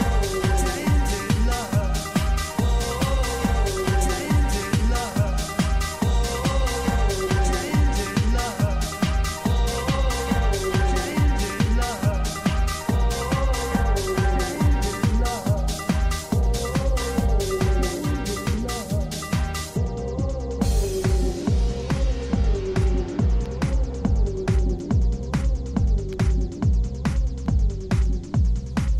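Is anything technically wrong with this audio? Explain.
No, nothing stood out as technically wrong on listening to this audio.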